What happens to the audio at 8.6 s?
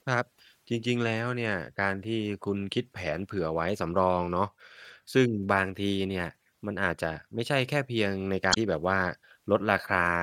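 Around 8.50 to 8.57 s the speech breaks into a brief chirp, squawk, click or short hole. That is damaged data in the compressed stream. The decoder misreads frames and loses sync.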